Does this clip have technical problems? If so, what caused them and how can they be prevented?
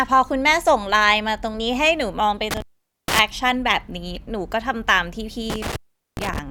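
Yes. There is an intermittent contact fault at 2.51 to 3.19 s and again at 5.50 to 6.39 s. A loose plug or cable opens briefly, and the speech drops out for about 462 ms and then about 410 ms. Crackle marks the edges of each gap. Faint hiss stays underneath while the line is open. Reseating connectors and replacing worn cables prevents this.

At 4.15 s, compressed frames are skipped. The speech jumps ahead by about a tenth of a second, which fits roughly ten lost frames of 10 ms each. Those frames were missing from the file or rejected as damaged. Checking file integrity and using reliable transfer or storage prevents this.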